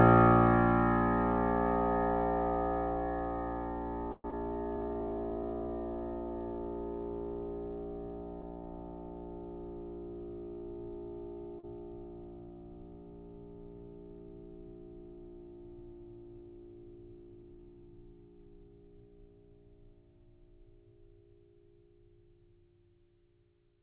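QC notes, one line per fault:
4.12–4.34 s, long network dropout: the music carries on as a fading continuation of the preceding sound for about 200 ms, drops to roughly 30 ms of silence, then resumes with about 100 ms missing. This is likely a network gap that moved the playout delay by around 40 ms.
4.77–5.69 s, jitter buffer slow-down: playback runs at about 90% speed with unchanged pitch, stretching the passage by roughly 100 ms. The receiver is repeating short pitch-period segments to rebuild its reserve, which draws the sound out.
11.59–11.65 s, short concealed packet loss: about 40 ms of audio never arrived and was replaced by 38 ms of extrapolated sound blended back into the real signal. The result is a brief smear in the music, heard against a band limited to 4 kHz, consistent with G.711 mu-law.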